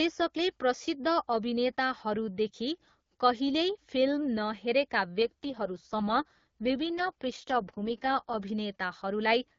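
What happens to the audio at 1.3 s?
Nothing goes wrong at 1.3 s; the speech runs through intact at that moment, carried by the AMR wideband (HD Voice) codec at 12.65 kbit/s with only the light coding character that rate leaves.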